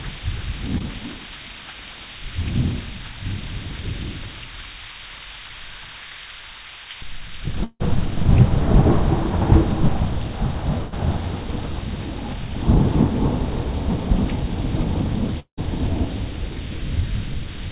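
A recording of everyday sounds carried over a narrowband call path, with nothing above 4 kHz, which fits G.711 mu-law at 64 kbps. At 0.78 to 0.82 s there is short concealed packet loss: about 20 ms never arrived, and the decoder bridged it by extending the previous sound, leaving a brief smear. At 7.64 to 7.82 s and again at 15.40 to 15.59 s, about 160 ms and 180 ms of audio go missing. In each case the last sound is stretched into a fading buzz or hiss that drops to silence, briefly the first time and for about 90 ms the second, before playback resumes further on. These are likely long network dropouts. At 10.78 to 10.94 s a burst of packet loss removes about 140 ms, filled throughout by a held, decaying continuation of the preceding sound with no silent gap before the audio picks up again.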